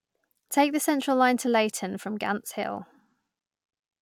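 Speech recording, no technical faults detected.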